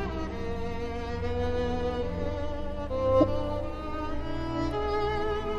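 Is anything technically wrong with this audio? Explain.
Yes. At 3.20 to 3.24 s there is a corrupt frame decoded: flipped bits in a single compressed frame were played anyway, so misread gains and codes put energy at the wrong frequencies. It sounds like a short chirp or noise blip peaking around -10 dBFS, seen as a brief vertical smear on the spectrogram and a sudden spike on the waveform.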